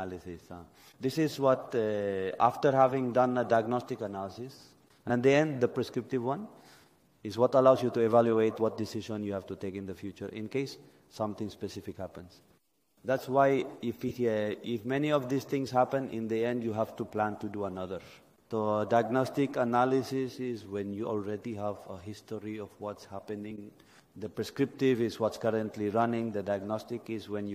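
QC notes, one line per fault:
5.09 s, compressed frames skipped: the audio jumps ahead by roughly 20 ms because whole compressed frames were missing or rejected by the decoder.
14.08–14.11 s, corrupt frame decoded: damaged bits in a few frames were played anyway, so misread gains and codes put energy at wrong frequencies. The result is a short glitch peaking around -25 dBFS, lasting about as long as the damaged frames.
23.50–23.59 s, compressed frames skipped: again roughly 20 ms of audio is missing where dropped or refused frames were never played.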